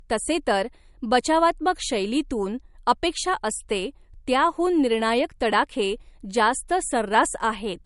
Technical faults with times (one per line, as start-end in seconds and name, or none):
0.00-7.85 low-bitrate audio saved at a high bitrate